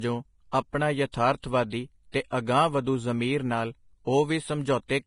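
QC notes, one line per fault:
Throughout: Vorbis compression, likely the cause of the heavy damage here. Nothing comes through above 10.6 kHz, so the top end is gone, and the treble that remains is grainy and hissy, as though the fine detail was swapped for noise of about the same level. The speech has a rough, smeared edge and its attacks are blurred. The degree of damage fits a low bitrate of roughly 29 kbps.
2.31 s: pre-echo. A brief hiss of about 19 ms sits just ahead of a sharp onset, so the attack arrives softened, with a smear in front of it. The codec spreads its quantisation noise across the whole transform block, and because the loud attack lands late in that block, noise sized for the loud part also spills into the quiet moment just before it.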